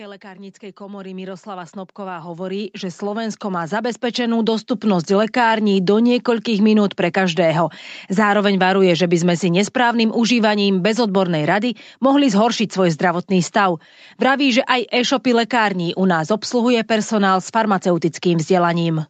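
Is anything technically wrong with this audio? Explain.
Yes. From 0.21 to 5.41 s, automatic gain rising: the gain control judged the input too quiet and kept raising its gain, by about 20 dB overall. The speech and the background noise swell together until the level settles, just before "do niekoľkých minút pre".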